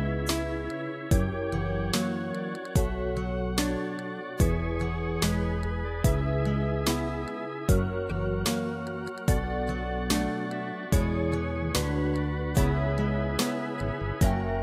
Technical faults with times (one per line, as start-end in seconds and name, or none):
8.09-8.12 broken MP3 bit reservoir